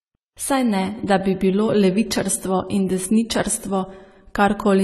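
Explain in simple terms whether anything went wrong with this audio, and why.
Yes, something went wrong across the whole speech clip. It sounds dull and smeared, with a fizzy, warbly edge on the hissy sounds and nothing above about 13.6 kHz. That's most likely heavy AAC compression squeezing the audio into too little data.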